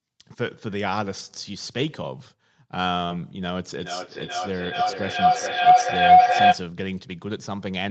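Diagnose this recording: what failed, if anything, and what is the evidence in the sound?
Network stage, lost packets rebuilt from error correction: at 1.67–1.97 s, 3.10–3.16 s and 5.80 s the sound turns briefly rougher and noisier but never drops out. The next packet carried a low-bitrate copy that the Opus decoder played instead. The absence of a gap separates this from ordinary concealment.

Network stage, burst of packet loss: at 3.05–3.12 s the last sound is stretched for about 46 ms and faded into a held buzz or hiss. Then about 40 ms of audio is simply missing. Unlike the rebuilt frames, nothing real fills that stretch.

Acoustic loop, feedback howl: from 3.76 to 6.69 s a tone near 700 Hz grows to about 14 dB above the speech, with the loop repeating roughly every 0.4 s. This is two devices in one room on the same call, with level gained on each trip around the loop. Echo would fade; this keeps building.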